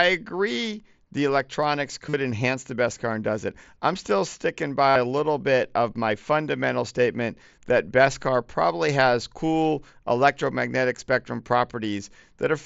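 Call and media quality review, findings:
Concealed Bluetooth headset packet loss at 2.09 s (45 ms, after "agree the electronics") and 4.89 s (60 ms, after "it I'm still sticking"). Buzzy tone held at full level, slight warble on recovery. Headset-to-phone packets lost, gaps filled by repeating best-matching recent waveform.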